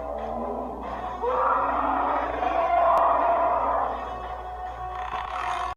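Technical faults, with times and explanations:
5.13 to 5.28 s, frames out of order: two neighbouring chunks of about 60 ms each, which fits runs of three frames, got swapped and decoded that way, so the stretch flutters oddly, though nothing's actually lost.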